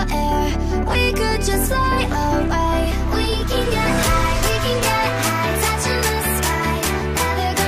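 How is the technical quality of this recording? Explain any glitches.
One glitch stands out: compressed frames are skipped between 3.73 and 3.76 s. At that point the audio jumps forward, losing something like 70 ms of material, which fits a few 20 ms frames of compressed data that were missing or discarded by the decoder as corrupt. The sound resumes slightly ahead of where it left off.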